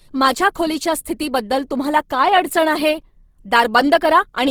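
From start to finish the speech sounds rough and grainy, with plainly audible codec damage. The cause is likely Opus compression in its music mode. When bits run short, that mode keeps each band's energy but fills the detail with folded copies of lower bands or with noise. Voiced tones therefore turn noisy rather than swirling. The damage fits a low rate near 16 kbps. The top end still reaches about 20.3 kHz, so nothing sounds muffled.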